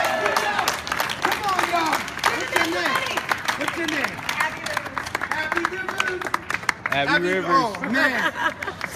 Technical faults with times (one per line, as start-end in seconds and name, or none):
none